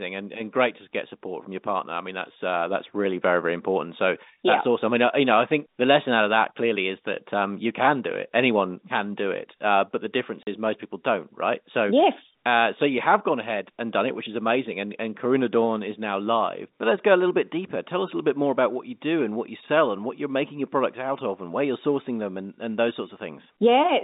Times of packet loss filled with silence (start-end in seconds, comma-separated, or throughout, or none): 10.43-10.47